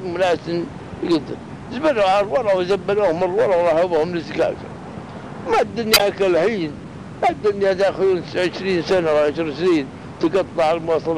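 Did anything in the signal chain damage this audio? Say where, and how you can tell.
Yes. A corrupt frame was decoded at the codec stage, from 5.93 to 6.01 s. For about 80 ms a decoding error, peaking around -10 dBFS, cuts across the sound and bears no relation to what comes before or after it. That span covers a few compressed frames whose bits were flipped. The decoder played them anyway, so wrong gains and misread spectral codes put energy at the wrong frequencies until clean frames resumed.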